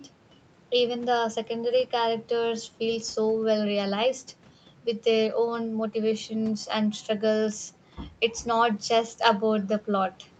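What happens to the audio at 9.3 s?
Nothing goes wrong at 9.3 s: the speech there carries on intact, with only the ordinary band limit around 8 kHz from the call path, and no dropout, glitch or other fault at that moment.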